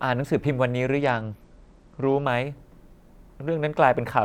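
From 1.01 s to 2.25 s the speech goes dull and grainy in a way that fits a Bluetooth SBC bit pool drop, with the sound pointing to a fall from a bit pool of 28 to about 11, near 90 kbps. Starved of bits, the encoder leaves the upper sub-bands nearly empty and quantises the rest coarsely. Unlike a plain low-pass filter, the treble loss comes with rising grit, and both vanish together when the rate recovers.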